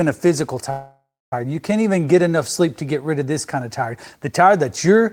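At 0.70 s, right after "a physical", the speech stops moving forward and the last sound hangs on as a fading buzz. It drops to silence for about 250 ms before the talk picks up again at 1.33 s. This is a call audio freeze: packets likely stalled in transit and the jitter buffer ran dry. The receiver stretched the final sound to fill about 616 ms. When delivery resumed, the speech continued from where it stopped, so nothing was lost, but everything after is pushed later.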